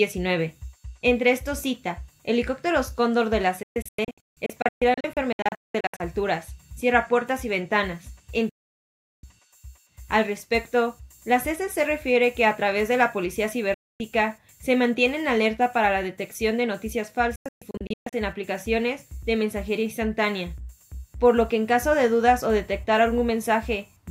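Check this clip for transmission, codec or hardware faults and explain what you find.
Four digital broadcast dropouts: 3.63–6.00 s and 17.36–18.13 s as scattered holes, plus solid gaps at 8.49–9.24 s and 13.74–14.00 s. The receiver lost valid frames and muted, with a 3 ms fade giving near-instant cuts.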